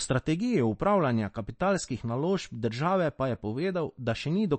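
From start to finish the speech has that watery, swirly quality of MP3 compression, and it's plainly audible. There's nothing above 8.3 kHz, so the top end feels shut off, which is the encoder cutting treble at a fixed frequency. Weaker detail flickers in and out as it gets dropped frame to frame. The cause is likely a low-bitrate MP3 encode, and the damage fits something around 36 kbps.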